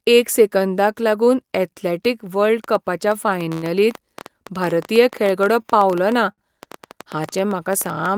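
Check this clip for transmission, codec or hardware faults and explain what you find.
Two kinds of fault are present: a train of clicks from 2.64 s to the end of the speech, and three short stalls from late packets.

From 2.64 s to the end, a train of clicks runs at about 8.7 per second with irregular spacing. The clicks are most likely electrical interference from nearby equipment or a faulty connection or power supply, injecting near-identical pulses into the signal. They stand a little louder than the speech itself, so the ticking stays clearly audible over the talking and through the pauses.

Short stalls from late packets occur at 3.53 to 3.64 s, 5.62 to 5.66 s, and 6.32 to 6.40 s. Each time, a packet missed its playout deadline and the jitter buffer ran dry. The receiver held the last sound for about 98 ms, 18 ms and 59 ms respectively, then resumed where it left off, so nothing is lost. 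The held sound drags with a faint buzz or dip, and each stall adds that much delay.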